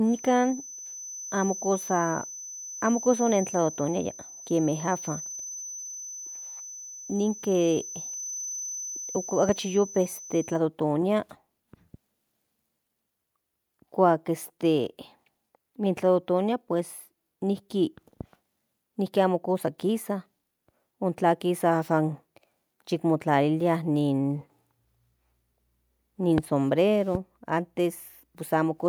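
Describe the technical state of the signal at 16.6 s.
At 16.6 s the signal is intact, with no dropout, clipping, distortion or other fault audible at that point.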